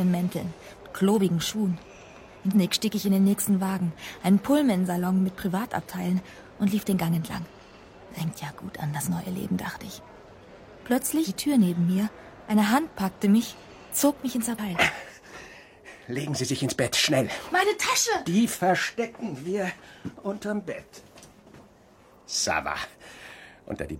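Damaged data in a compressed stream turns up three times, at 2.51 to 2.56 s, 11.24 to 11.30 s and 14.54 to 14.59 s. Corrupted bytes leave the decoder unable to read those frames, so it loses sync and hunts for the next valid frame header before output resumes. Each event lasts about 50 ms and comes through as a short chirp, squawk, click or brief hole.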